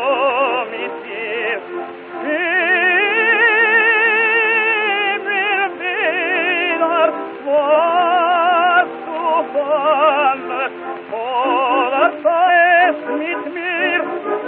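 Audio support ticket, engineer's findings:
Brief digital glitch at 3.80 s, a single burst well under 20 ms long. Damaged data in a compressed stream. Decoder hit corrupted bytes, misread the frame, lost sync and resumed at the next valid frame header. Component: stream or file transport.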